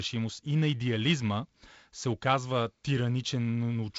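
No technical faults detected.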